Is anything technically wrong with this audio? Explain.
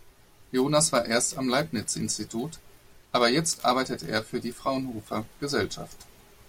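No, no technical faults here.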